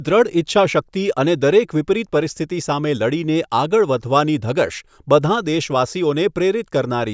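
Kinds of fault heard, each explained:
No kinds of fault are heard in the speech, so there is none to explain.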